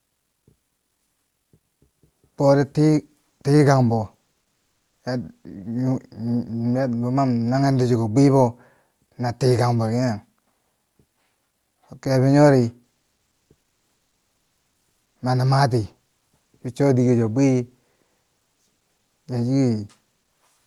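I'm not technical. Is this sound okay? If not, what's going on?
Yes, this speech recording shows no technical faults; it came through an ordinary internet call connection, which trims off some of the very highest treble.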